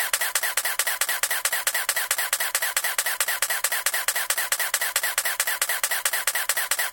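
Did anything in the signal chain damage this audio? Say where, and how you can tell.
No, no fault is audible.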